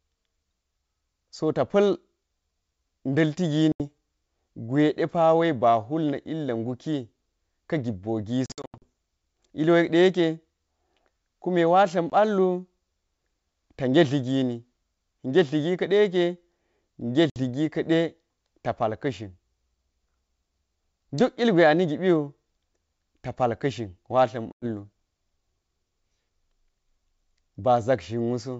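Packet loss on an ADPCM call cuts hard-edged silent holes at 3.72, 8.46 to 8.89, 12.10, 17.30 and 24.52 s. The decoder's predictor loses step with the sender's. Each return brings brief distortion.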